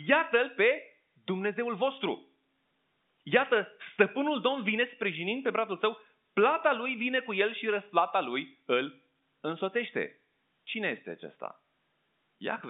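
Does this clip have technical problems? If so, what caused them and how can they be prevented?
No, there are no technical problems to fix here.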